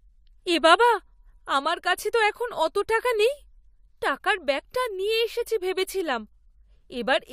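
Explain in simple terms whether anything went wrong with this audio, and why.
Clock slip clicks run from about 0.2 s to 7.1 s: faint, evenly spaced ticks roughly every third of a second, around thirty in all, sitting under the speech. The likely cause is two pieces of equipment each keeping time on their own clock, one running slightly fast, by something like 70 parts per million. Every time the gap grows to one whole sample, a single sample gets dropped or doubled, and that tiny jump is the tick.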